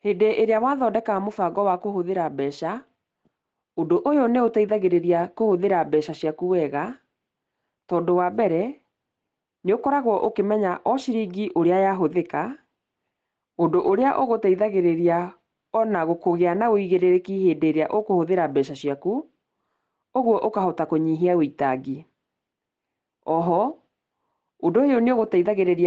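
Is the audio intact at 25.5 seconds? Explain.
No. At 25.5 seconds, as across the whole clip, there is gain pumping, likely from input gain set far too high with a fast limiter or compressor clamping it down on each loud syllable. The level swings by roughly 5 dB, so loud and soft passages sit unnaturally close together and the speech sounds squashed and breathing.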